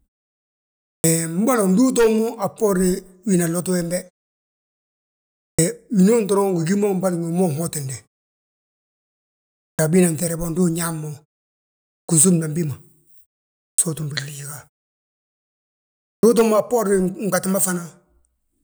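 Clipped start after a pause at 0.96, 5.51, 9.71, 12.01, 13.71 (before "utúmbi gliiga") and 16.15 s: the output wakes late, swallowing about 75 to 80 ms of each onset. Speech itself loses its first sounds.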